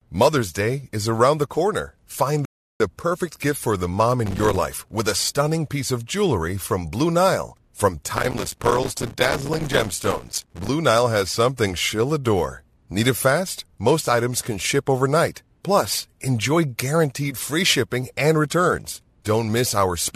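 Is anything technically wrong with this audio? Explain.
Yes, there are two faults.

From 2.45 to 2.80 s there is a rebuffering stall. Playback ran dry and paused for about 0.35 s, then resumed exactly where it stopped. Nothing is lost, unlike a dropout.

Processor overload crackle occurs from 4.26 to 4.56 s and more heavily from 8.16 to 10.69 s. Missed buffers of around 3 ms leave many tiny silent gaps, heard as gritty tearing rather than one clean pause.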